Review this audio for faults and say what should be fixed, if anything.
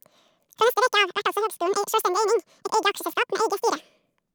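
The whole clip has the audio read two samples at a time (double speed) fault. The speech runs at 2x speed and sits 12 semitones, a full octave, too high. Every other sample is dropped because the reader treats each pair of samples as one frame, as if it were stereo or double-width data. To prevent it, make the reader take its channel count and sample width from the file header instead of assuming them.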